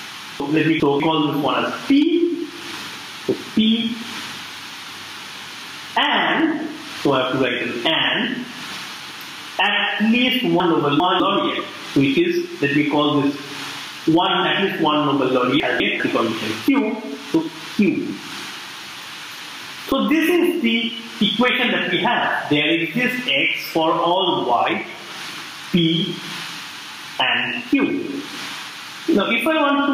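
Gain pumping runs throughout: the level ducks by roughly 25 dB under loud sounds, unlike a noise gate's hard cut, likely from excessive gain driving a fast limiter. Chunks out of order occur at 0.4 to 1.0 s, 10.6 to 11.2 s and 15.6 to 16.0 s, where a 200 ms chunk plays one or two chunks late, giving jumbled sound but, unlike dropouts, no missing audio.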